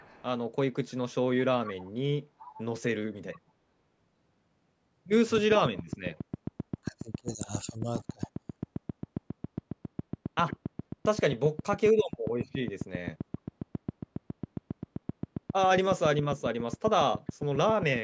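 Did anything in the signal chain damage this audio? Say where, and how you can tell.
Yes. In the call processing, an echo leak appears at 0.0–0.24 s, 1.64–1.91 s, 2.38–2.64 s and 7.99–8.04 s: a faint-to-moderate copy of the speech trailing by 419 ms. On a spectrogram, weaker duplicate harmonic patterns sit 0.42 s behind the originals. The likely cause is residual loudspeaker pickup escaping the echo canceller.

A train of clicks runs from 5.38 s to 17.97 s. About a hundred near-identical ticks arrive at a regular 7.39 per second, peaking well above the speech. The waveform shows evenly spaced spikes, and the spectrogram shows thin full-height vertical lines, even in pauses. These are likely interference or a struggling interface at the analogue or converter stage.

Speech suppressed in double talk, from the call processing, is heard at 6.01–6.07 s, 6.54–6.59 s, 6.81–7.48 s and 7.64–8.56 s. 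The voice dips by roughly 20–25 dB. The waveform envelope caves in abruptly, and the spectrogram thins out there. The echo canceller likely mistook overlapping talk for echo and attenuated it.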